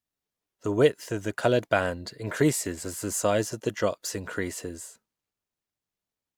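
A short speech recording with no audible technical faults anywhere in it.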